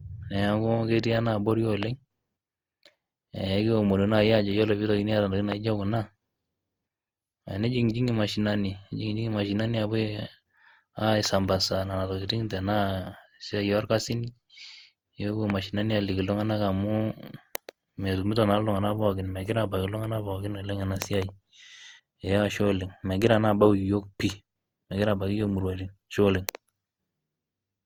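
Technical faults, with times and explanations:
Throughout, generation loss: the speech has a swirly, hollow smear and softened consonant attacks, more than a single pass at this quality would give. That points to around 64 kbit/s Opus, likely re-encoded about four times, each pass stacking fresh quantisation noise.
1.83–1.85 s, 5.52–5.54 s and 15.50–15.52 s, loud pop: three single sharp pops, roughly 15 dB above the speech, each lasting about 20 ms while the talking carries on underneath. Likely a brief voltage spike, from a plug, switch, static or driver glitch, shaped by the circuitry that follows.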